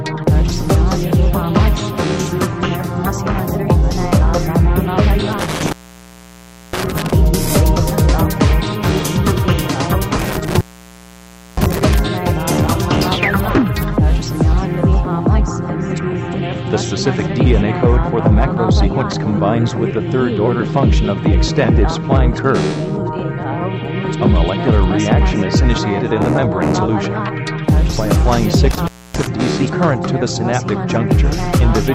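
Around 5.33 to 7.12 s there's an intermittent contact, a loose cable or plug briefly opening up. You get crackle at the edges, then the sound drops out for about 1.01 s with just faint hiss left behind. The same thing happens again from 10.19 to 11.99 s, open for about 0.97 s, and once more near the end, 28.71 to 29.27 s, with a shorter gap of about 0.26 s.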